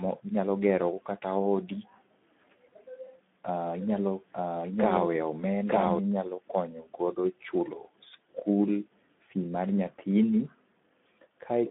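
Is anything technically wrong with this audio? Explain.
Yes. Two faults are audible.

Throughout the clip, the speech carries Speex codec damage. This low-rate CELP codec gives the excitation too few bits, which fits roughly 11 kbps. The result sounds noisy and hoarse. The band runs only from 200 Hz to 3.5 kHz, with nothing above 3.7 kHz.

From 3.81 to 5.99 s, there is a doubled audio track. A second full-band copy trails about a second behind, at roughly the original's level. It is dry, with no decay, and it starts and stops abruptly. The likely cause is a slower second capture path.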